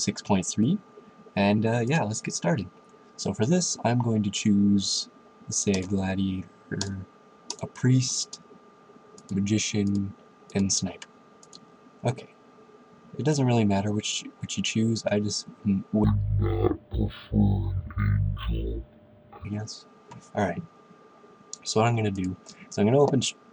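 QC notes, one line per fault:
16.04–19.45 s, stereo read as mono. For these 3.4 seconds the audio drops to half speed and sits a full octave low, 12 semitones down. The left and right samples were taken in turn as one channel, so each stereo frame became two mono samples. That doubles the length of the material and halves every frequency. A fainter mirrored copy of the sound also shows in the upper half of the spectrum, a product of the interleaving.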